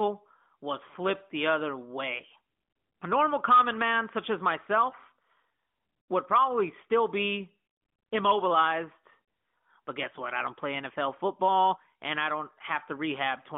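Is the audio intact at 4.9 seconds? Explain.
No. Between 4.90 and 4.94 s a speech frame was lost to radio errors, which fits a single 20 ms AMR frame. The decoder bridged the gap by repeating the previous pitch and vocal-tract settings at lower gain, causing a brief dip or warble in the narrowband speech.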